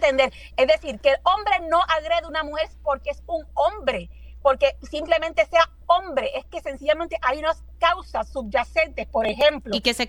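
No technical fault can be heard anywhere in the audio.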